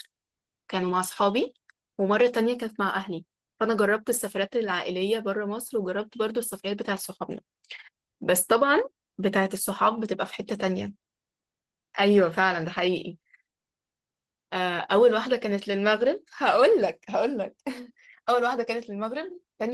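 Nothing in this recording of speech stands out as a technical fault at any point, so there's nothing to flag here.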